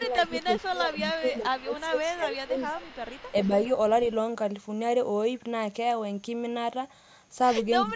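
From the start to 2.84 s the speech dips in level, by about 15 dB at worst and for roughly two seconds in all. That's speech suppressed in double talk, likely an echo canceller that couldn't tell this talker from the far side's loudspeaker echo and ducked both. Overlapping that, from 0.27 to 0.64 s, 0.97 to 1.85 s and 2.36 to 3.73 s, there's an echo leak: a faint copy of the speech trailing 414 ms behind, about 25 dB down. The likely cause is a speakerphone whose canceller let part of the loudspeaker sound back through. The ducking returns briefly and shallowly, about 5 dB, from 3.32 to 3.53 s and from 7.86 to 7.95 s. A fainter echo scrap, about 35 dB down, closes the clip at 7.91 s.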